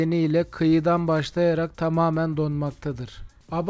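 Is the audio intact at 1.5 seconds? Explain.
Yes, at 1.5 seconds the audio is intact, carried cleanly through a WebRTC call path whose G.722 coding leaves nothing above 8 kHz, with no dropout, glitch or distortion at that moment.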